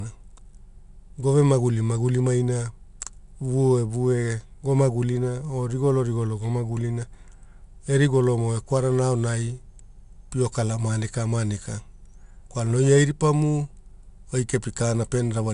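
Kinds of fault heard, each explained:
4-bit ADPCM compression: coarse 4-bit prediction steps leave a gritty, level-following hiss on the speech; a spectrogram shows broadband noise riding loud syllables and nothing above 10.6 kHz.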